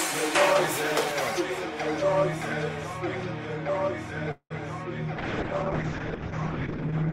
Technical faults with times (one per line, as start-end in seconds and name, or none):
4.31-4.52 call audio freeze
5.18-7.12 call bitrate drop